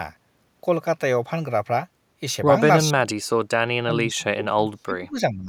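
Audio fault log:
2.85–3.18 s and 3.82–5.49 s, speech suppressed in double talk: the echo canceller likely treated the talker as loudspeaker echo while both ends spoke at once, and clamped down on everything it picked up. The speech sinks by up to about 35 dB, first for roughly a third of a second, then for around a second and a half of the final stretch, so the talker dips or cuts out in pieces.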